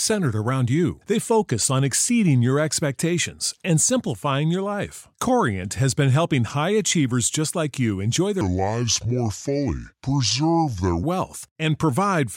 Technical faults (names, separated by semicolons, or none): section at the wrong speed